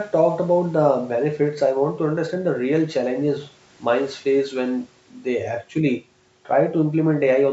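No technical faults can be heard in the speech, which has passed through normal call microphone processing that trims away the lowest bass and carries nothing above 8 kHz.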